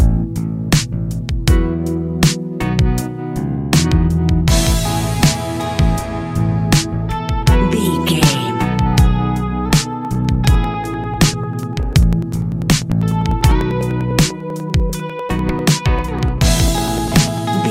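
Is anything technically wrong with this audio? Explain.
Yes. From 10.05 s to 17.38 s there are periodic USB or driver dropouts. Something blocks the audio path every 0.099 s, and roughly a millisecond of audio is skipped each time. The result is about ten evenly spaced ticks per second, heard over the sound.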